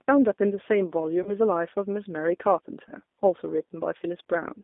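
Throughout, the G.729 codec band-limits the speech to roughly 250 Hz to 3.6 kHz and rebuilds it from a filter and sparse pulses, giving a plainly rough, synthetic texture.

VoIP packet loss concealed by the speech codec occurs at 1.23 to 1.30 s, about 30 ms lost, and at 2.89 to 2.92 s, about 10 ms. Each gap is bridged by a fading, buzzy or noisy extrapolation of the preceding sound.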